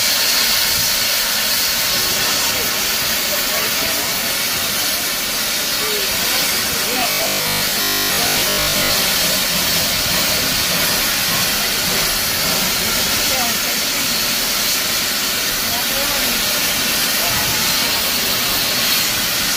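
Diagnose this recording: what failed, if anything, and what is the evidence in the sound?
Robotic sound from repeated short buffers runs from 6.94 to 8.96 s. Across those two seconds the sound collapses into a rigid, metallic buzz pitched at 50 Hz that still loosely tracks the underlying contour. The stage is the driver or buffer: new audio was likely arriving too seldom, so the software kept replaying its last 20 ms block, which fits that 50 Hz period, and most of the real audio in the span was skipped.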